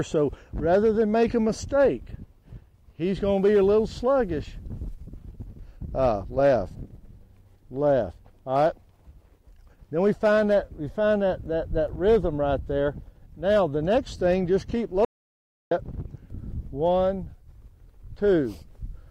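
At 15.05 s the sound cuts off abruptly and stays completely silent until 15.71 s, an audio dropout to silence lasting about 0.66 s. The gap holds no room tone or noise floor at all, and the audio resumes mid-flow, so whatever occurred in that stretch is missing. This points most likely to the input being lost briefly while the recorder kept writing silence. On a waveform it shows as a flat line; on a spectrogram, a sharp-edged black column.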